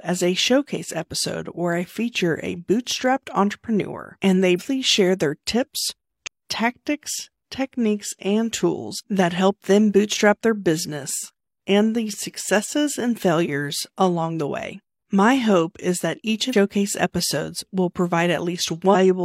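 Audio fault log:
4.55 s, 6.23 s, 16.49 s: compressed frames skipped. Runs of 46.4 ms frames went missing or were rejected, so the audio jumps ahead about 0.3, 0.7 and 0.3 s, after "bootstrapped entrepreneur and they", "share their tips" and "hope is that each".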